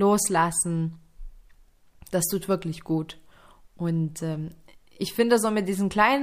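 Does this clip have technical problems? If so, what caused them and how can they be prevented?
No, this speech clip has no technical problems to report. With nothing to fix, there is nothing here that needs preventing.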